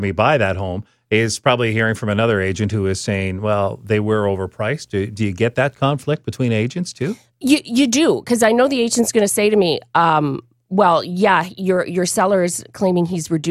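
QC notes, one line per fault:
3.62–6.15 s, video or display buzz: a screen or video cable couples into the speech path, adding a buzz at the 60 Hz picture field rate with a hash of harmonics above it. It sits faint, around 45 dB below the speech.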